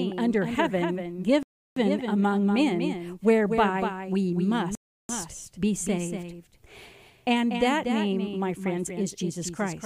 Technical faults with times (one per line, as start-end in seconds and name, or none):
0.00-9.86 doubled audio track
1.43-1.76 rebuffering stall
4.75-5.09 rebuffering stall